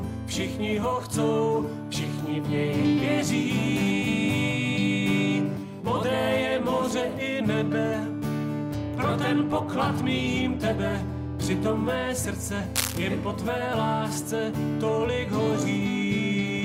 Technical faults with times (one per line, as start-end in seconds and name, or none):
12.75-12.98 cable scratch noise